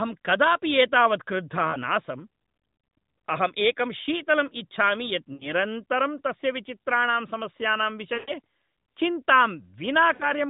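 Lost AMR speech frames break up the narrowband speech at 1.70–1.76 s, 5.34–5.52 s, 8.14–8.32 s and 10.14–10.30 s. Frames failed their checks, so the decoder reused its last good pitch and vocal-tract settings at falling gain. The short gaps give a quick dip or warble. The longest, at 8.14 s, stretches the voice and fades it. Unlike a hard dropout, the sound smears and decays rather than cutting abruptly to silence.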